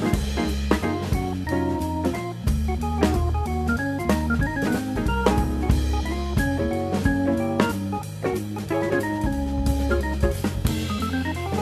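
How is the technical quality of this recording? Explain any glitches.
No technical faults are audible.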